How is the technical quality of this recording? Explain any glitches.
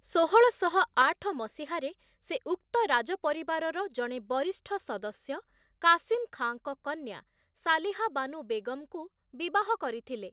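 The speech has two sudden level drops, both consistent with a microphone volume stepped down by the call software, heard through a narrowband path with nothing above 4 kHz, which fits G.711 mu-law at 64 kbps. At 1.02 s the level falls by about 4 dB just before "ଆଠ ମସିହାରେ ସେ ଉକ୍ତ", and at 6.15 s by about 2 dB before "ଖାଁଙ୍କ କନ୍ୟା". Voice and background drop together in a single step, likely because automatic gain control judged the input too hot and cut the device's input volume.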